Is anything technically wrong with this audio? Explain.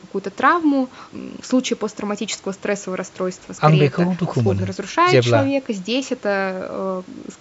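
No, nothing is technically wrong with this audio.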